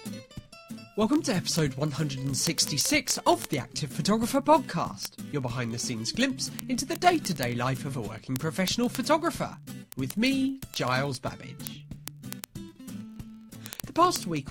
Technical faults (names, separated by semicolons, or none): word clock ticks